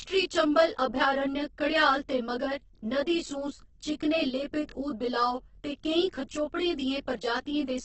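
From start to finish the speech has channel delay (comb filtering). One channel arrives roughly 20 ms behind the other, and the mono sum cancels at evenly spaced frequencies beginning near 20 Hz. This leaves a dense comb of fixed notches, so the voice sounds rough and slightly doubled.

Also throughout, the audio is grainy and rough, with tonal parts of the voice turned noisy and nothing above 8.1 kHz. The likely cause is heavy Opus compression in its CELT music mode, at a bitrate that fits about 12 kbps.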